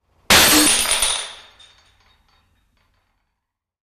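Sound recording with damaged data in a compressed stream at 0.65 s: corrupted bytes make the decoder misread a frame and lose sync until the next header, leaving a brief glitch.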